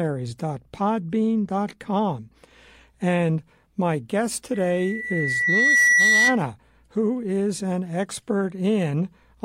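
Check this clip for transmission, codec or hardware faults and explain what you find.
One hardware fault is present: loudspeaker feedback squeal, from 4.53 s to 6.39 s, starting right after "my guest" and ending before "who is an". The microphone is picking up its own loudspeaker, and at 2 kHz the loop gain passes unity, so that frequency keeps recirculating and growing. The tone swells over about a second and a half to roughly 10 dB above the speech. On a spectrogram it shows as a bright horizontal line at 2 kHz, and the waveform envelope ramps up steadily over that span.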